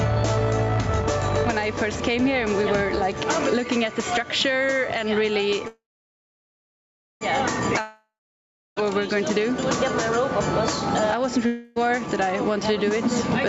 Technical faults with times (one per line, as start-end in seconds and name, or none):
0.00-13.48 gain pumping
5.67-7.23 call audio freeze
7.81-8.87 long network dropout
11.46-11.85 long network dropout